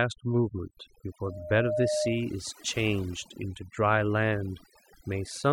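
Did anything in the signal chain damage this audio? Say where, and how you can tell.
Yes, two things. Across the whole clip there's overdone noise removal, probably in the call processing stage. The background drops and breaks up into little twinkling specks, because the suppressor is cutting bands near its noise estimate and taking quiet speech detail with them.

Then from 1.23 to 2.38 s there's a loudspeaker feedback squeal at 608 Hz. It's an acoustic loop in playback, with the mic picking up its own speaker. The tone swells over roughly half a second until it's about as loud as the speech, then stops.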